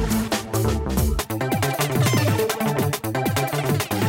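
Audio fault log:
1.19 to 4.09 s, audio read two samples at a time (double speed): from this point the playback path starts treating each pair of consecutive samples as a single frame, as if the stream held two interleaved channels or samples of double width. Every second of material is therefore consumed in half a second, so the audio runs at 2x speed and sits 12 semitones higher, a full octave up, until the end of the clip.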